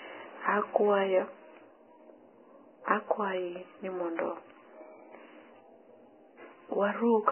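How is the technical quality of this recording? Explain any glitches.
Technical quality is poor, with heavy damage running through the whole speech clip. Nothing above about 3.1 kHz remains, and the upper band sounds hissy and grainy, with blurred consonant attacks. The likely cause is Vorbis compression at a very low bitrate, around 10 kbps, where the treble is cut off and what survives is quantised so coarsely that its detail turns into noise.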